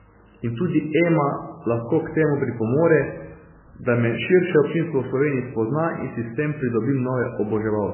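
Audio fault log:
Throughout: MP3 compression, likely the cause of the heavy damage heard in this speech. Nothing reaches above 3 kHz, so sibilants and consonant detail are gone and the sound is dull and boxy. The damage points to an extremely low bitrate, around 8 kbps. That starves the encoder of bits, so it removes the treble entirely and drops the quieter frequency lines. The survivors flicker between frames, giving a watery, swirling texture and smeared onsets.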